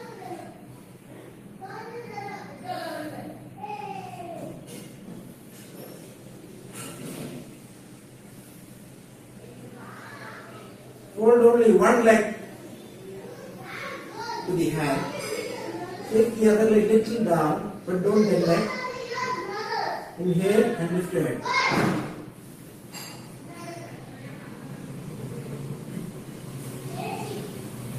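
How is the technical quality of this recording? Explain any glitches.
Nothing stood out on listening; there are no glitches to explain.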